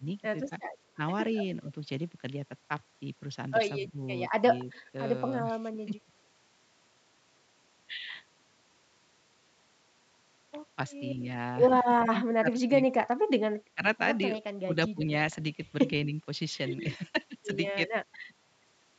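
Speech suppressed in double talk, likely from an echo canceller clamping down while both sides spoke, dips the talker by about 10 dB in brief patches between 0.0 and 0.99 s, and by about 15 dB around 3.87 to 3.97 s. An echo leak, likely residual loudspeaker pickup the canceller missed, returns a faint copy delayed 222 ms, about 35 dB down, at 4.72 to 4.81 s. The same suppression then cuts deeper, about 20 dB, in pieces between 4.93 and 6.12 s, and again, totalling roughly a second, across 11.86 to 18.18 s.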